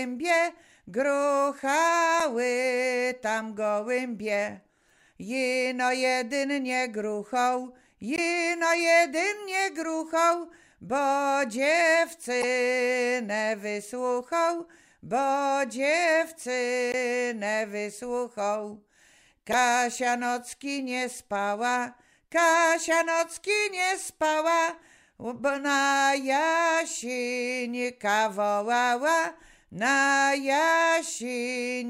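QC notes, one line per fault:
2.2, 8.16 to 8.19, 12.41 to 12.44, 16.92 to 16.94 and 19.52 to 19.54 s, damaged data in a compressed stream: five short blips, each gone in under 30 ms. At each one a bit of the encoded stream was garbled, so the decoder choked on those frames, lost its place and hunted for the next good frame header. That's why you get a brief glitch before the sound picks up again.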